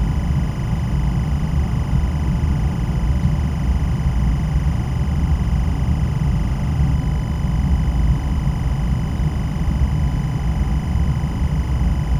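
A recording of everyday sounds with timecode bleed running for its whole length: a steady chirping warble, switching between tones around 1 kHz and 2 kHz at a 25-frame rate, sits roughly 20 dB below the sound, where linear timecode from an adjacent track or cable has leaked into the audio path.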